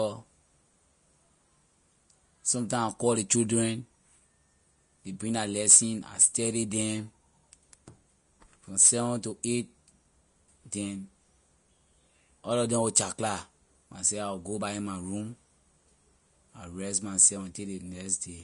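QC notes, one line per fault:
throughout, likely Vorbis compression: grainy, hissy treble with roughened speech and nothing above a sharp 10.6 kHz cut-off, fitting a low bitrate around 34 kbps; spectrogram shows speckled highs, empty above.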